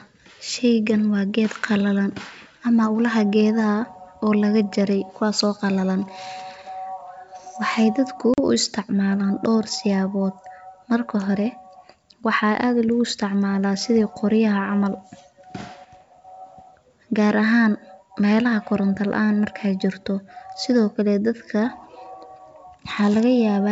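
After "waxeey dadku", at 8.34–8.39 s, ADPCM packet loss cuts a hard-edged 40 ms hole. Unlike a plain dropout, speech returns slightly distorted while the decoder's predictor resyncs.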